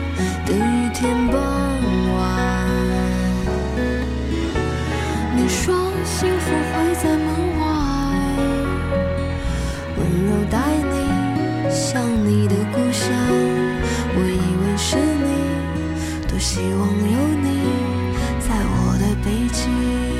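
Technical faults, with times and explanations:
No technical faults can be heard anywhere in the clip.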